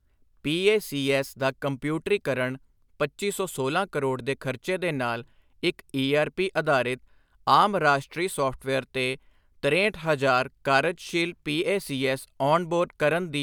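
Speech with no audible faults.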